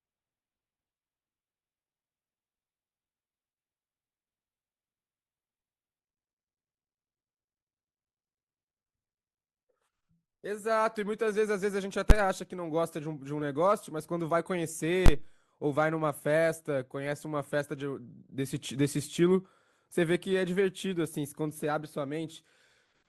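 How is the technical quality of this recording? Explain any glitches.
The recording has two kinds of fault: reduced quality at the start, and two sharp bangs later on.

Adaptive stream starting at a low bitrate, 0 to 6.0 s. The player began on a lean version of the stream so playback could start quickly, then switched up once it had gauged the connection. For those first six seconds the speech lacks real treble, with dull or synthetic-sounding highs and stronger codec artefacts. At 6.0 s clarity jumps abruptly with no gap, which fits a step from roughly 12 kbit/s Opus to 64 kbit/s.

Invalid numbers at full scale, at 12.10 s and from 15.06 to 15.08 s. A calculation produced infinite or invalid values, and these became the largest positive or negative value for a whole processing block. The signal sits pinned at one extreme value for about 11 ms and then about 22 ms, which fits blocks of 512 and 1024 samples. 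Each event is heard as a single loud bang that replaces the speech for that instant.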